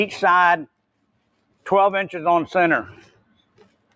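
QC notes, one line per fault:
Throughout, noise suppressor applied to music or sounds: the audio pumps and thins, with held, steady parts sinking while sharp onsets punch through, giving a swing of around 20 dB between what survives and what is pulled down. A speech-oriented suppressor was left active and is treating sustained tones, ambience and decay tails as background noise, so it keeps ducking them while letting transients pass.
0.67 to 1.66 s and 2.93 s to the end, sound cut by the noise suppressor: in both stretches the sound drops away sharply, by as much as about 21 dB, for roughly 0.7 s of the first span and about a second in the second, which runs through the final moments. Here the suppressor judged the steady or fading material to be noise and attenuated it more than its surroundings.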